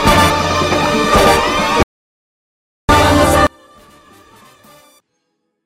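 At 1.83 s the audio drops out to silence, and it stays out until 2.89 s, a gap of about 1.06 s. The gap is silent, with no room tone or noise floor at all, so it is not a quiet passage or a fade. That blankness also sets it apart from a packet-loss glitch, which is far shorter. The likely cause is a lost input, such as a disconnected device or a mute, while recording carried on. Whatever happened in that second is simply missing.

From 3.47 s to the end, one channel inverted shows up on mono playback. The centred material collapses by about 34 dB, leaving only a faint residue of whatever differs between the two sides. Unlike a dropout, the sound doesn't stop, and unlike a low-pass or level fault, the loss falls on the centre of the image rather than on a frequency band. The cause is likely reversed polarity on one side, so the shared content cancels when the channels are summed.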